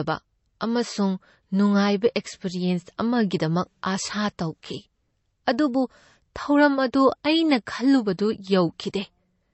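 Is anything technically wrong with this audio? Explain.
Yes. Low-bitrate audio saved at a high bitrate, throughout: the speech has nothing above 8 kHz and carries smeared, watery coding artefacts. This is likely an MP3 encoded at a very low bitrate, near 35 kbit/s, then re-saved at about 256 kbit/s, which cannot restore the lost detail.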